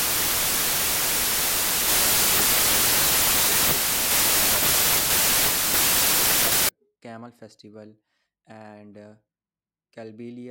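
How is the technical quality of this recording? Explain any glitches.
The recording has a wrong sample width fault from the start to 6.69 s. The decoder appears to read each sample as four bytes when the data were packed three bytes per sample, which fits 24-bit audio misread as 32-bit. Each read value straddles two real samples, so most values are byte scrambles, and the stream runs 1.33 times fast. The result is loud, harsh noise with the speech faintly buried inside, sped up and raised in pitch by that same ratio.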